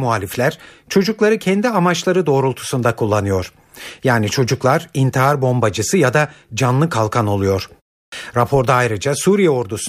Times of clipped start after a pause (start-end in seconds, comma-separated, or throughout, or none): 8.08-8.12